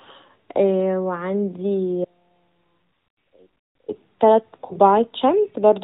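From 2.05 to 3.88 s the speech drops out abruptly for about 1.84 s, leaving only a faint residue about 35 dB below normal level before cutting back in. This is an audio dropout to a faint residue, likely from the wanted signal being lost while the path after the break stayed live.

At 4.66 to 4.76 s the voice briefly dips and smears into a short fading tail, then returns rough. These are lost AMR speech frames: a 40 ms gap, which fits two 20 ms frames failing their checks, so the AMR-NB decoder stretched the last good sound with falling gain.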